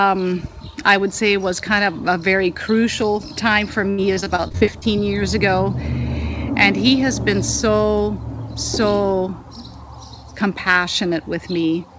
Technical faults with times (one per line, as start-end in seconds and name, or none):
3.90-4.83 repeated packet loss (robotic sound)
10.69-10.78 hard clipping